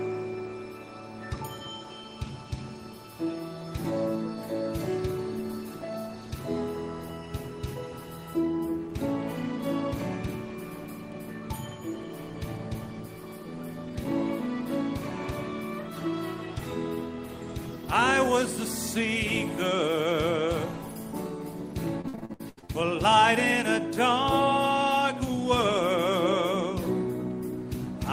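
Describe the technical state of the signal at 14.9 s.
At 14.9 s the signal is intact, with no audible technical fault at that point.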